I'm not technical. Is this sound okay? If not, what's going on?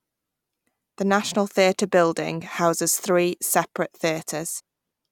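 No. At 4.59 s the speech jumps ahead. These are compressed frames skipped: about 0.15 seconds of missing audio was never played.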